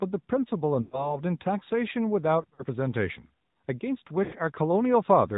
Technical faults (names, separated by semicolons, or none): AMR narrowband mobile codec; lost AMR speech frames